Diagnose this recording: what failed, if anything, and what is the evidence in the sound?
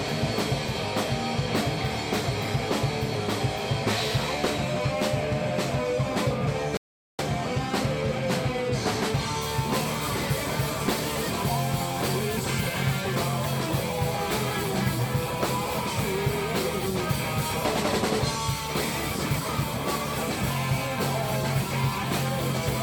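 The player likely ran out of data or was blocked, a playback stall: the sound drops to silence from 6.77 to 7.19 s, then resumes.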